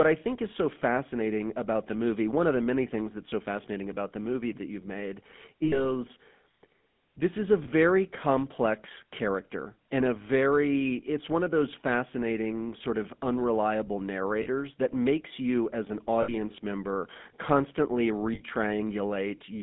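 The whole clip carries the GSM full-rate codec, consistent with 13 kbps. Speech is band-limited to 150 Hz to 3.5 kHz, with a plainly audible buzzy, gravelly roughness.

Lost GSM frames follow at 5.64–5.86 s, 7.64–7.68 s, 14.42–14.47 s, 16.22–16.33 s and 18.34–18.41 s. Each gap, 20 to 80 ms, is patched by repeating the last good frame, heard as a brief metallic ring.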